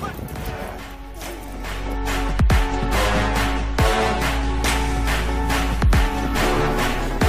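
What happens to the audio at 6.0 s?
Nothing goes wrong at 6.0 s; the audio runs on intact through that moment.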